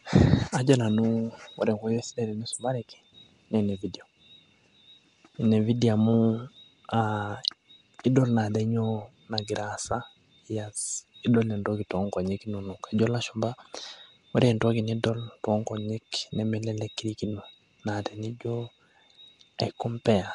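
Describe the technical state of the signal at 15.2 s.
At 15.2 s, as throughout, the speech carries a rough, hissy, underwater smear, likely Nellymoser compression at about 44 kbps. The spectrogram shows nothing above 10.6 kHz, with weak bands filled by noise.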